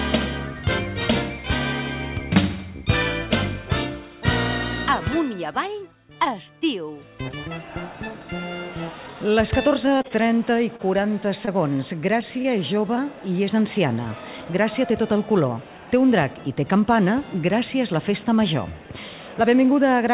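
From 9.86 to 10.29 s there's repeated packet loss that gives a robotic sound. Six gaps, the longest 21 ms, leave about 60 ms of real audio missing. The receiver patches them by extending the previous sound, so about 22% of that stretch is filler, and it comes out choppy and robotic.

At 10.76 to 10.81 s there's a short stall from a late packet. The jitter buffer ran dry, so the last sound is held for about 30 ms until the packet shows up. Nothing is lost, but you hear a brief drawn-out moment as the delay jumps by 30 ms.

At 11.45 to 11.49 s there's a short concealed packet loss. About 20 ms never arrived, and the receiver papers over it with 18 ms of continued sound before blending back in, which comes across as a quick smear or wobble. All of this rides on a call path with nothing above 4 kHz, which fits a narrowband G.711-style codec.

At 12.42 to 12.46 s there's another short stall from a late packet, this time with the sound held for about 24 ms while the delay shifts by the same amount. 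It's a slight stretch or dip rather than a gap.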